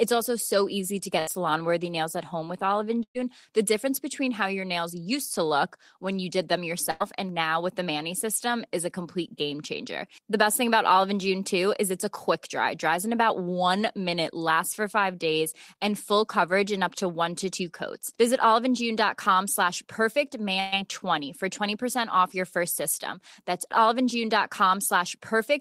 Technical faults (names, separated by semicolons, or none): burst of packet loss